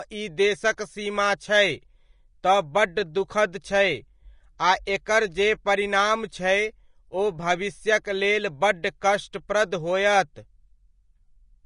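From start to finish the speech carries plainly audible Vorbis compression damage. Nothing is present above 10.5 kHz, and the remaining treble has a hissy, grainy texture, with consonant attacks softened. The likely cause is a low-quality Vorbis encode, one that fits a bitrate of around 33 kbps. At that rate the encoder keeps only a smooth outline of the upper spectrum and replaces its fine detail with noise of similar level.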